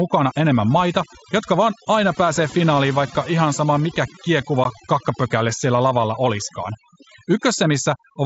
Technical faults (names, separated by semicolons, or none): overdone noise removal; unconcealed Bluetooth headset packet loss